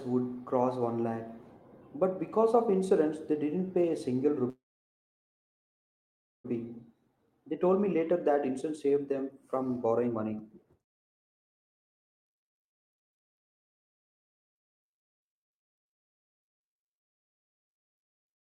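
At 4.49 s the speech stops and is held over by a brief buzzy continuation of the last sound, which fades almost at once into silence lasting about 1.84 s, until 6.46 s. This is a call audio freeze, likely from packets stalling in transit so the jitter buffer drained and the receiver had to fill about 1.95 s on its own. When the speech resumes it picks up where it left off, so the stall adds delay rather than cutting anything out.

From 7.08 s to 18.24 s there is a jitter buffer speed-up. With the backlog built up during the stall, the receiver trims short pitch-period segments again and again to bring the delay back down. The speech runs at about 118% of normal speed while keeping its pitch, so it sounds rushed, and roughly two seconds of audio are dropped across that stretch.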